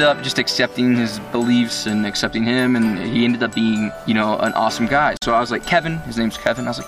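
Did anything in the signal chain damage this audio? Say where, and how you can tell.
Yes. At 5.17 s the sound cuts out for about 50 ms and then resumes at 5.22 s, as if it had kept playing underneath. The likely cause is a Bluetooth dropout in the wireless link: packets arrived too late and were discarded, and the gap fits roughly two lost packets.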